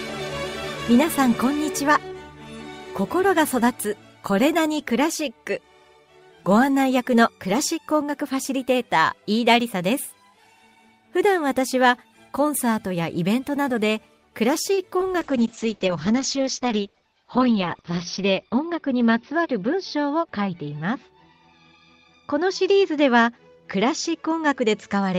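A short stall from a late packet comes first, at 14.73 to 14.79 s. A packet arrived late and the jitter buffer ran dry. The receiver held the last sound for about 41 ms, then resumed from the same point. Nothing is lost, but playback now runs 41 ms later. Short concealed packet loss follows at 14.97 to 15.08 s. About 20 ms of audio never reached the decoder, which fits one lost packet. The receiver filled part of the gap by extending the preceding sound, then blended back. The result is a brief smear, and the timing shifts by a few more milliseconds. A call bitrate drop then starts at 15.2 s and lasts to the end. The bandwidth estimate fell, and the encoder went from 32 kbps to 8 kbps, staying at its lowest for 2.95 s. Coding becomes coarse and the audio band narrows from 20 kHz to 6 kHz. The sound turns rough and muffled.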